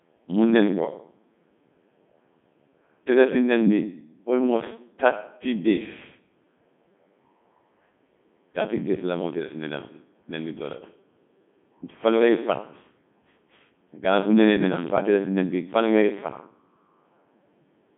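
Codec 2 vocoder damage runs throughout. The speech is resynthesised from sine waves using only pitch, voicing, energy and envelope, so the waveform is lost and the sound is heavily robotic and buzzy. The band spans 150 Hz to 3.5 kHz, with nothing above 3.8 kHz. This fits Codec 2's 3.2 kbit/s mode.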